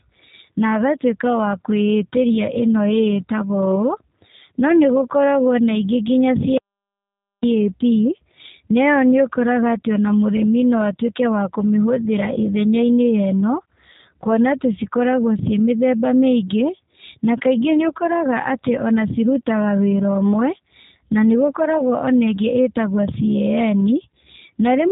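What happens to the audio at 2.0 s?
G.729 codec coding runs through 2.0 s and the whole clip. The speech is rebuilt from a vocal-tract filter and sparse pulses, so it sounds band-limited below 4 kHz, rough and synthetic, which fits an 8 kbit/s voice codec.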